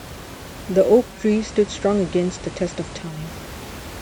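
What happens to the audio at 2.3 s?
At 2.3 s the receiver is in the middle of digital radio blending to analogue, which runs from 0.99 to 3.33 s. Having lost the digital stream, it cross-fades over about 0.38 s to the station's FM broadcast, and later back. The sound turns hissier, dropping about 1 dB. On a spectrogram, a faint hiss floor appears roughly 40 dB below the signal, below the room noise.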